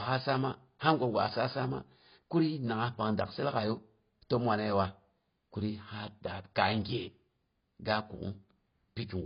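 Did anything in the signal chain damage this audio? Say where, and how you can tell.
Yes. The damage sits at the codec stage and runs through the whole clip. Nothing reaches above about 5.1 kHz, the upper band has gaps, and sibilants and held vowels take on a fizzy, warbling smear. That points to AAC compression, likely AAC-LC at a very low rate in the region of 16 kbps. Short of bits, the encoder pulled its cut-off down and quantised the remaining spectral lines so coarsely that whole bands dropped out, leaving the speech dull and heavily smeared.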